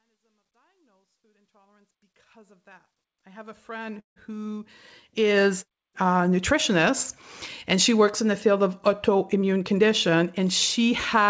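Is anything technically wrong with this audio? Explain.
Yes, three faults are audible in this speech.

Truncation distortion on a fade runs from 0.0 to 5.62 s and is worst up to 2.33 s. The fade-in keeps about 12 bits with no dither, so the quiet start sounds gritty. On the waveform it shows as stair-stepped blocks.

A call audio freeze runs from 4.00 to 4.19 s. Packets likely stalled and the jitter buffer emptied, so a 160 ms gap opens with 140 ms of near-silence. On the spectrogram it appears as a blank vertical band.

A jitter buffer speed-up follows "in the field of" and runs from 9.08 to 11.27 s. About 150 ms of pitch periods are cut out, so the speech runs 7% faster at the same pitch and sounds hurried. The spectrogram shows the syllables compressed in time.

The G.722 call path band-limits everything to below 8 kHz, so the spectrogram is empty above that line.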